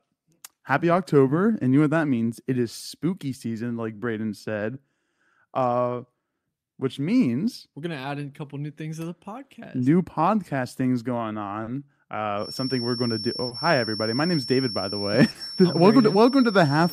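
Throughout the clip there is clock drift between sender and receiver: the sender's clock runs roughly 2% slow, so the receiver's jitter buffer keeps draining. The result is a recurring unsteadiness spread across the whole recording rather than one isolated glitch, which sets it apart from a single network dropout.

From 0.54 to 10.84 s, repeated timing corrections stretch the speech to 98% speed, adding roughly a fifth of a second in total. The receiver repeats short pieces, all in the same lengthening direction but unevenly spaced. The effect is a faintly dragging, uneven tempo with at most slight hiccups.

At 11.63 s, 13.47 s and 15.31 s comes a short stall from a late packet. Each time the buffer ran empty and the last sound was held for 40 ms, with nothing lost, before the speech resumed from the same point. Each stall is heard as a brief frozen sustain with a slight buzz or dip, unlike a dropout, which would leave a hole.

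From 12.35 s to the end, a thin steady tone at 5.4 kHz sits about 10 dB under the speech, wavering slightly in level. This is likely a feedback whistle from a loudspeaker-to-microphone loop held just short of runaway. It never builds into a howl, and its single fixed pitch separates it from broadband hiss.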